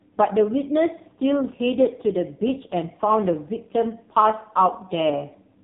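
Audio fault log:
throughout AMR narrowband mobile codec: the speech is confined to a narrow telephone band with nothing above 3.8 kHz, and it carries a heavy buzzy, synthetic edge. The codec rebuilds each 20 ms frame from a vocal-tract model excited by only a few pulses, and the coarseness points to one of the lowest AMR-NB modes, near 5 kbps. A plain low-pass filter would dull the sound without adding that buzz, and the damage lacks the metallic ringing of music codecs.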